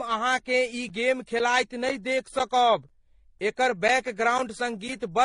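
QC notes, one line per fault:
Throughout: transcoding between lossy codecs. Nothing comes through above 10.9 kHz, so the speech sounds dull and closed-in. On top of that there's a mix of swirly, watery smearing and some grainy roughness that doesn't sound like a single encoder. It's likely a chain of AAC-LC at 32 kbit/s, then HE-AAC at 24 kbit/s, then MP3 at 48 kbit/s. Each pass spends bits re-coding the previous damage and adds its own, and the lowest cut-off in the chain sets the ceiling.
0.39 to 4.89 s: periodic USB or driver dropouts. Every 0.5 s a slice of roughly 10 ms vanishes and is replaced by silence. That comes to around ten evenly spaced gaps. Each one lands as a small tick or pop, and they're only audible while the speech is sounding, because cutting a running waveform to zero makes a click. The steady spacing points to something on the USB bus or in the audio driver stalling at a fixed interval.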